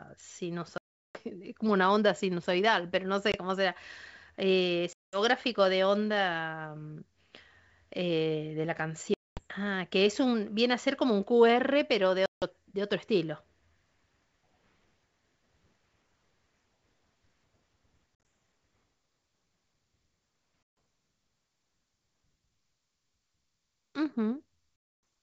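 Packet loss on an ADPCM call hits the speech at 0.78, 3.32, 4.93, 9.14, 12.26, 18.15, 20.63 and 24.76 s. Each gap is a hard-edged silence, from 20 to 370 ms long. The decoder's predictor then lags the sender, so speech returns briefly slightly distorted.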